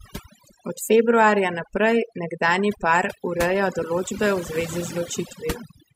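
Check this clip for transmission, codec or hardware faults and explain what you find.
The speech carries one fault, present for the whole clip: overdone noise removal. The noise suppressor was pushed too hard, so any frequency band sitting near its noise estimate is pulled down or gated off entirely, taking the softer parts of the voice with it. The result is a near-silent background flecked with twinkling specks. On a spectrogram the gaps look unnaturally black, scattered with isolated bright dots, and the speech harmonics appear patchy and broken.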